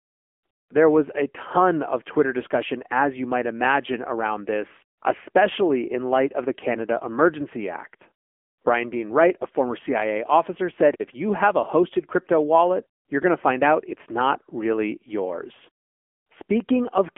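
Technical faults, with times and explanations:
Throughout, AMR narrowband mobile codec: the speech is squeezed into a phone-line band of roughly 250 Hz to 3.4 kHz, with nothing at all above 3.5 kHz, so it sounds boxy and dull. The buzzy, synthetic edge is plainly audible, and it fits one of the lower AMR-NB modes, around 8 kbps. At that rate the codec rebuilds the voice from a crude vocal-tract model fed by only a few pulses per 5 ms.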